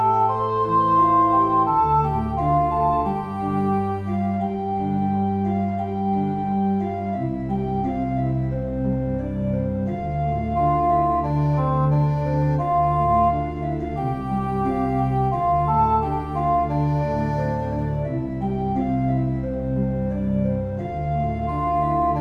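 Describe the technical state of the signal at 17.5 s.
At 17.5 s the signal is intact, with no audible fault at that moment.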